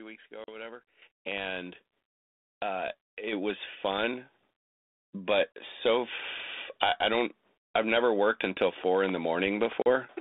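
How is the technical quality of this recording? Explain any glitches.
The recording is a narrowband telephone call with two kinds of glitch: three short dropouts and two sudden jumps in level. The audio sits in a band of roughly 250 Hz to 3.7 kHz with only light coding grain, which fits G.726 ADPCM at 32 kbit/s.

Packet loss on an ADPCM call occurs at 0.44 s, at 5.53 s (just before "so I") and at 9.82 s. Each time about 40 ms of sound, probably a couple of packets, is replaced by silence. ADPCM sends only differences from an adaptive prediction, so after the gap the receiver's predictor and step size no longer match the sender's. The speech returns slightly distorted, and this settles within tens of milliseconds. On a spectrogram each one is a sharp-edged blank vertical stripe. On the waveform it is a flat gap followed by a short, uneven burst.

Microphone volume stepped up happens twice: by about 9 dB at 1.02 s, and by about 5 dB at 3.33 s, just before "was fun". 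The call software judged the input too quiet and raised the device's input volume in a single step. The voice and the background noise jump louder together. The waveform envelope steps up abruptly, and the spectrogram brightens across all frequencies from that moment on.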